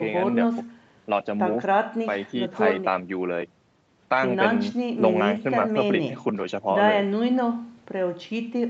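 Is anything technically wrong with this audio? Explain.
No, no technical faults heard.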